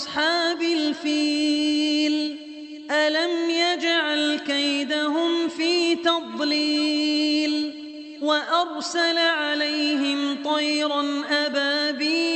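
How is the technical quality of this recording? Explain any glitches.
The recording carries the band-limited character of a call codec, with content stopping near 8 kHz, consistent with Opus. Three glitches stand out, all short concealed packet loss, at 2.25–2.29 s, 7.11–7.18 s and 7.91–7.95 s. Each time, about 20 ms of audio arrived too late to decode. The receiver extended the preceding sound to bridge the gap, then crossfaded back, leaving a brief smear or wobble.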